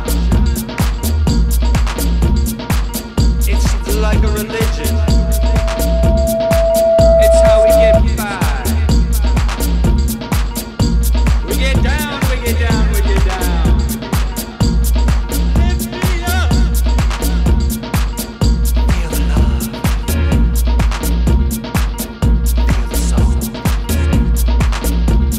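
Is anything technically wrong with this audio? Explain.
Yes. From 4.58 to 8.02 s there is loudspeaker feedback squeal: a microphone picks up its own loudspeaker, so a 662 Hz tone circulates with gain above unity and swells over about three seconds to roughly 5 dB above the programme. On a spectrogram this appears as a single brightening horizontal line, and on a waveform as a swelling envelope.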